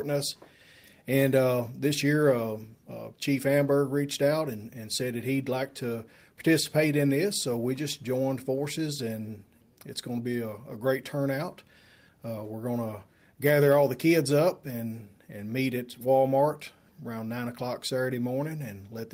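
No technical faults are audible.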